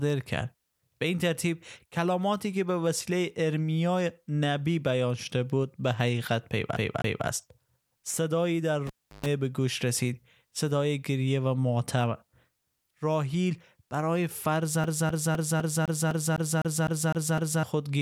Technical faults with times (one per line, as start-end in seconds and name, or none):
6.76-7.27 CD stuck on one turn
8.87-9.26 cable pulled and plugged in
14.84-17.63 CD stuck on one turn